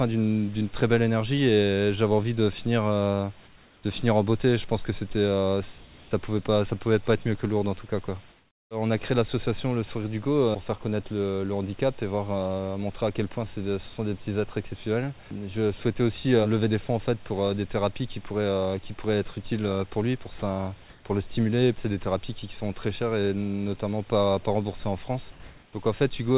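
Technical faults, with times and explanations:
3.47 to 3.83 s, 5.78 to 6.11 s, 8.3 to 8.69 s, 20.9 to 21.05 s, 25.31 to 25.73 s: comfort noise in place of the background. Each pause loses its real background texture. A steady, featureless hiss fills it instead, about 3 dB quieter at 3.47 s and about 2 dB louder at 25.31 s. The likely cause is discontinuous transmission, with the receiver synthesising noise during the gaps.
20.39 to 20.42 s: sound dropped by the voice detector. A brief sliver of sound, about 20 ms, vanishes into steady noise. The detector likely judged it as background, stopped sending, and the receiver substituted comfort noise until transmission resumed.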